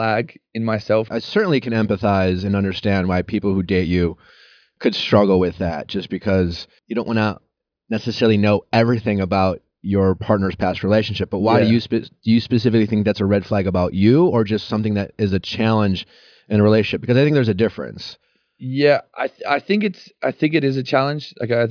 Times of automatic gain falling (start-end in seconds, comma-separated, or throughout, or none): none